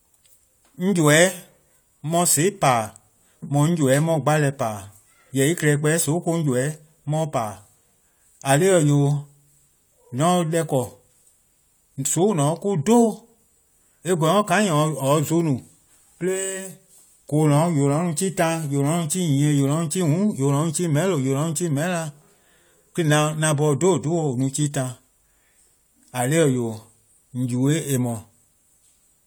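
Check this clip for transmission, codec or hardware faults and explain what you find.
No faults found.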